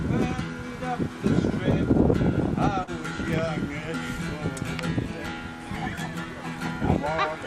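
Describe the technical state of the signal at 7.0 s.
At 7.0 s the signal is intact, with no dropout, clipping, glitch or other fault audible at that point.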